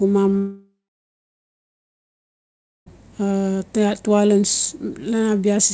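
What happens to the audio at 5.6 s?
Nothing goes wrong at 5.6 s: the speech there comes through intact, carried by the WebRTC call path with its G.722 coding and nothing above 8 kHz.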